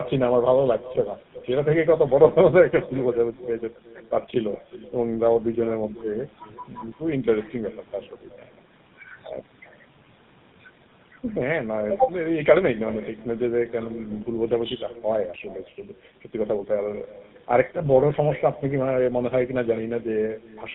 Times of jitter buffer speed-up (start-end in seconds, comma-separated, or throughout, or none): none